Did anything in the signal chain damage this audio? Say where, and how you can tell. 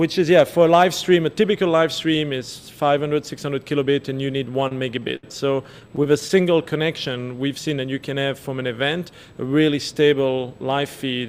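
Yes. Repeated stalls (stutter) occur from 4.52 to 5.24 s and from 5.72 to 6.38 s, at the network stage. Late packets kept emptying the jitter buffer, so the receiver stretched the last sound through each wait, up to 74 ms in the first burst. Nothing drops out, but the audio drags.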